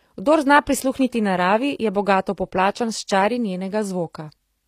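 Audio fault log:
Throughout, HE-AAC compression: the audio was likely passed through a low-bitrate HE-AAC encoder, one that sounds consistent with roughly 24 kbps, which codes only the lower spectrum and fills in the treble by replicating lower bands upward under a coarse envelope. That synthetic top end reaches higher than plain AAC would but its harmonics don't line up with those below, so sibilants come across gritty and metallic, and nothing is present above about 14.9 kHz.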